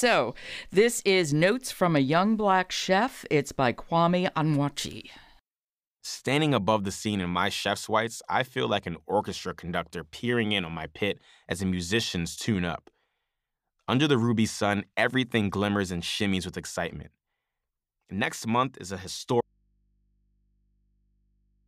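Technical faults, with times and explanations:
19.41 s to the end, audio dropout to a faint residue: just after "month is a" the speech cuts off abruptly and only a low mains hum remains, roughly 45 dB down. The likely cause is a lost signal feed while the input stayed live, picking up hum from the open connection.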